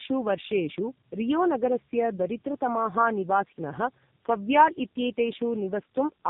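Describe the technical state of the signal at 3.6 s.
At 3.6 s you're hearing tandem speech coding that runs the whole clip: decoded and re-coded through G.729A, G.711, then AMR-NB, leaving rough, muffled, warbly speech with nothing above 3.8 kHz.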